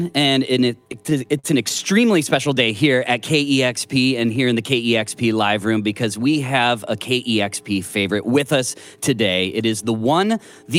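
From 0.87 to 1.81 s there are repeated stalls (stutter): packets kept arriving late, so the jitter buffer ran dry nine times, each gap filled by continuing the last sound, the longest about 43 ms. Nothing is lost, but the audio halts and restarts in audible hiccups.

Between 2.47 and 3.33 s comes a jitter buffer slow-down, quite unlike those breaks. The receiver repeated single pitch periods to rebuild its reserve, adding 35 ms and running at 97% speed. The sound drags at unchanged pitch, with no stops.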